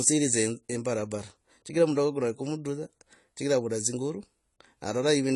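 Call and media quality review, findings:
AAC compression, entire clip: dull, smeared speech with warbling fizz on sibilants and held vowels. Spectrogram shows a flat ceiling at 11.4 kHz with nothing above. Likely cause is an AAC-LC encode, consistent with about 32 kbps, where coarse quantisation starves the high bands.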